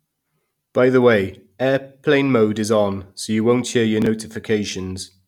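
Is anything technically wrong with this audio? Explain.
Yes, there is one fault: chunks out of order, from 4.02 to 4.06 s, just after "you won't hear your". A block of about 10.7 ms was delivered late and plays three blocks after its proper place. Nothing is lost, but the sequence is scrambled, so this brief stretch of speech sounds jumbled. Unlike a dropout, there is no gap, and unlike a repeat, nothing is heard twice.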